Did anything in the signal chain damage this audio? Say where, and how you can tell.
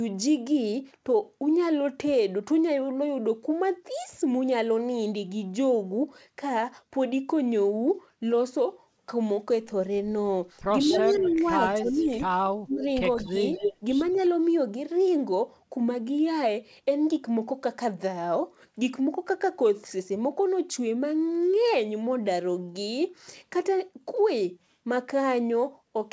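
Yes. The damage is in call processing. Speech suppressed in double talk appears at 10.85–12.23 s, 12.56–12.87 s and 13.15–13.58 s. Level drops by about 10 dB, and by about 30 dB at 12.56 s. The likely cause is an echo canceller ducking both talkers at once.

Echo leak also comes from call processing. A delayed copy trails the speech by about 210 ms at 10.92–11.48 s, 11.71–11.92 s, 13.18–13.29 s, 13.55–13.74 s and 14.14–14.26 s. At 13.55 s it matches the speech's level. Loudspeaker pickup likely slipped past the canceller.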